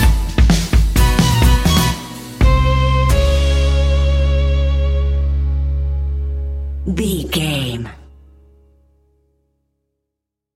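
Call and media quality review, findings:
Nothing stood out on listening to this recording.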